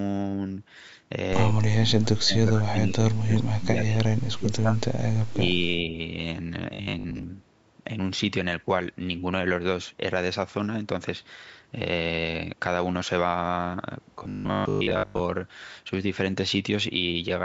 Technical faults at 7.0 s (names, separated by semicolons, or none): robotic sound from repeated short buffers